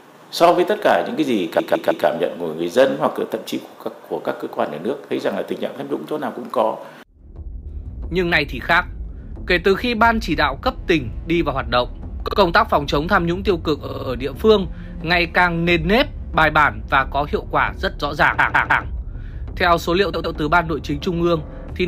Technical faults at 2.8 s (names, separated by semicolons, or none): none